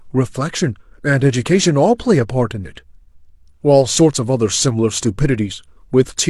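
A short recording of speech with no technical faults to report. Nothing in it calls for a time, a value or a cause.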